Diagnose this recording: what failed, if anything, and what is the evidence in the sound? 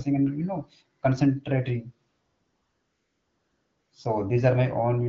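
AMR comfort noise, from the codec's discontinuous transmission, fills 2.09 to 3.91 s: for about 1.8 s the real background gives way to a smooth, steady hiss that switches in and out. Unlike a network dropout, the gap holds synthesized noise rather than silence or clicks.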